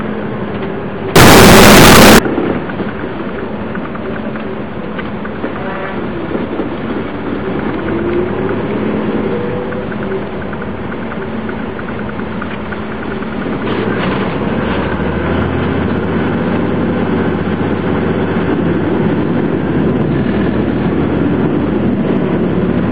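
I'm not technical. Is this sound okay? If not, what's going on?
No. From about 1.16 to 2.19 seconds the sound turns into loud, harsh distortion, where quiet moments come out as loud as strong ones. This is most likely a signed and unsigned mix-up: the playing software reads the numbers describing the waveform in the wrong format, so every point where the wave passes through its middle turns into a jump from one extreme to the other. Ordinary overload only roughens the loudest parts, but this mix-up makes even the softest parts blare.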